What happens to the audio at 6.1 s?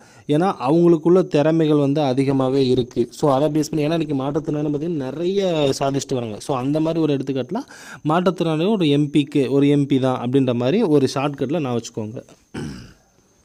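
At 6.1 s the audio is inside a call bitrate drop running from 2.31 to 7.10 s. The encoder has been starved of bits, consistent with a fall from around 128 kbps to 16 kbps, so coding turns coarse and the high frequencies are cut, leaving the sound rough, watery or muffled.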